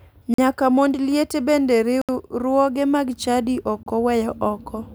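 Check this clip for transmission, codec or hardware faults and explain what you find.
The speech drops out three times, at 0.34 to 0.38 s, 2.02 to 2.09 s after "mond liete bende", and 3.83 to 3.86 s after "mag chadi ok". Each is a brief silence of 44, 72 and 31 ms before the sound resumes. This is likely a Bluetooth stall, where delayed packets empty the headphone buffer until retransmissions arrive.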